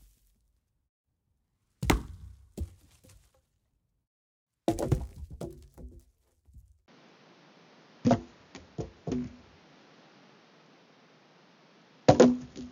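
Everyday sounds; at 6.86 s the input likely switched to a poorer device: a 20 ms gap, then nothing above 6.9 kHz, new background noise and a level shift of about 5 dB to the end.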